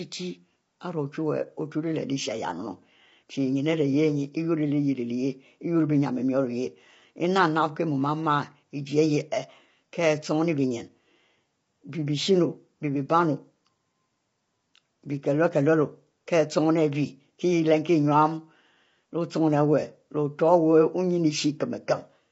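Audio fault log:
Throughout, low-delay AAC compression: speech sounds rough and grainy, with noise between harmonics and nothing above 7.7 kHz, likely from short-frame AAC-ELD coding at a low bitrate.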